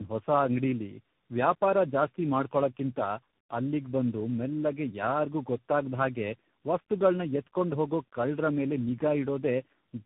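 Speech, rough, muffled and warbly from start to finish, the signature of tandem speech coding. The call passed through four speech coders in a row (CVSD, then G.729A at 8 kbit/s, AMR-NB at 7.4 kbit/s and CVSD again, joined by G.711 links), each re-encoding the previous one's damage. A spectrogram shows a hard ceiling at 3.7 kHz, smeared, wobbling harmonics and noisy fill between them. The waveform looks grainy rather than cleanly periodic.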